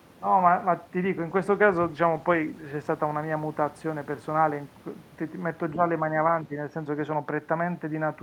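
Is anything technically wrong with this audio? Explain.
Yes, there are two kinds of fault in this speech clip.

From 1.19 to 4.59 s there is a call bitrate drop. The network's bandwidth estimate fell, and the encoder was pushed from 64 kbps down to about 18 kbps. It stayed at its lowest for 1.33 s. With so few bits it quantises the signal coarsely and discards the upper frequencies. The voice goes muffled and watery, with a rough, smeared texture, until the rate climbs back.

Two short dips follow, at 5.74 to 5.82 s and at 6.44 to 6.55 s. Each lasts about a tenth of a second or less, and the voice falls by around 10 dB. This is likely speech suppressed in double talk. The echo canceller, faced with both ends talking at once, could not tell the near talker from returning loudspeaker echo, so it attenuated everything. You hear the voice briefly duck, as if momentarily pulled away.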